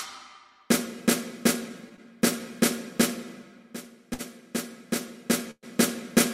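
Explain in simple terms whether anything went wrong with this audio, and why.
Three brief hitches occur, all caused by audio packets reaching the listener late.

Two are a short stall from a late packet, at 1.96 to 2.00 s and 4.14 to 4.21 s. Each time, a packet missed its moment and the receiver's waiting store of sound, the jitter buffer, ran dry. The receiver held the last bit of sound for 16 ms and then 52 ms until the packet arrived, then carried on. Nothing is lost, but the sound briefly drags with a faint buzz or dip.

The third, from 5.51 to 5.65 s, sounds like a call audio freeze. The sound stretches into a fading buzz or hiss and then goes quiet for about 60 ms before resuming exactly where it left off. In total, about 120 ms of stand-in sound and silence is added, and none of the real audio goes missing. The likely cause is packets held up in transit long enough to empty the jitter buffer completely.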